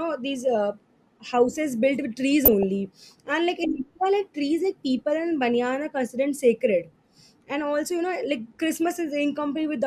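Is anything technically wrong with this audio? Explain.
Yes, there's DAB burbling in two short bursts, from 2.45 to 2.63 s and again from 8.74 to 8.91 s. Weak reception lets bit errors slip past the error correction into the MP2 data, at a rate on the order of a couple of errors per thousand bits. Corrupted samples put short blips of noise in single sub-bands and corrupted scale factors make individual sub-bands jump in level, and each burst is long enough to suggest around nine damaged frames. You hear it as burbling blips over the speech.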